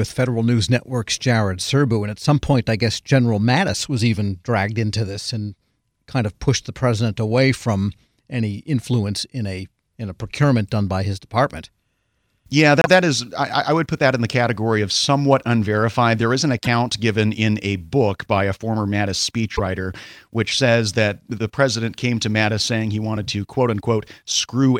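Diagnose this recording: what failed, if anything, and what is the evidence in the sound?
Codec stage: short skips at 12.82–12.87 s (before "that is I I"), 16.63–16.67 s ("is an" to "given in a book") and 19.55–19.60 s, likely a broken MP3 bit reservoir, with frames lost and the following ones decoding garbage.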